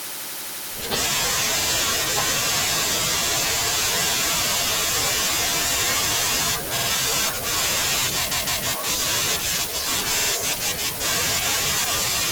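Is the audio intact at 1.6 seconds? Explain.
No. At 1.62 s the speech stutters: a slice of about 52 ms, running to 1.67 s, plays once and then immediately plays again. This is repeated frames. A short run of compressed audio, which fits two frames, was written or sent twice, so the decoder played it back twice in a row. The clip is therefore about 52 ms longer than it should be, and everything after 1.67 s arrives that much late.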